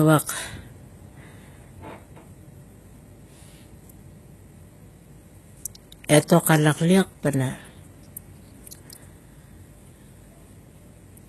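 Throughout, s sounds come out gritty and lispy, with nothing above 12.4 kHz. This is likely HE-AAC compression rebuilding the treble at a low bitrate, around 16 kbps.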